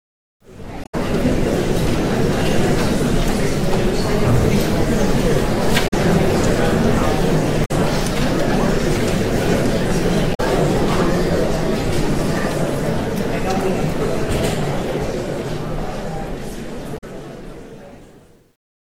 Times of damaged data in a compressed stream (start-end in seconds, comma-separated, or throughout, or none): 0.82-0.95, 5.84-5.94, 7.62-7.71, 10.31-10.40, 16.94-17.04